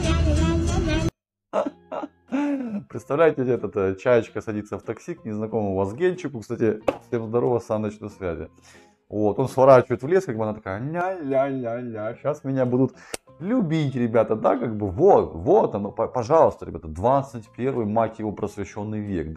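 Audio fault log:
11.01 to 12.14 s, channel delay (comb filtering): one channel fell behind the other by about 3 ms before the two were summed to mono. Anything common to both channels arrives twice, slightly offset, so it cancels at a series of evenly spaced frequencies, the first around 150 Hz and the rest stepping upward at regular intervals. Those fixed notches hollow out the spectrum, giving the audio a phasey, tube-like colour for just over a second.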